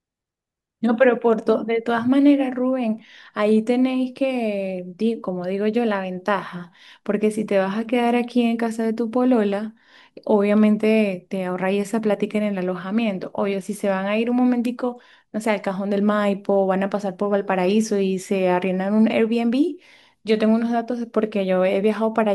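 At 12.14 s there's a single sharp click in the speech, and another at 21.84 s. Each is a thin, instantaneous tick with nothing missing around it. The likely cause is dropped samples: just a handful vanish from the stream, a tenth of a millisecond or so. That gap is far too brief to lose any sound, but the waveform jumps straight to a later value, and that step is what you hear as the click.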